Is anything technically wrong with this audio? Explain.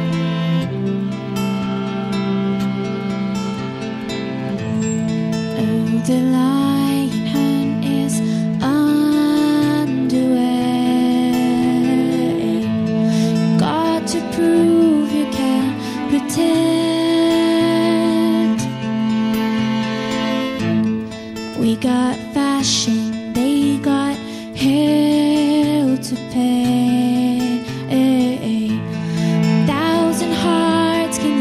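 No, the signal shows no technical faults anywhere in the recording.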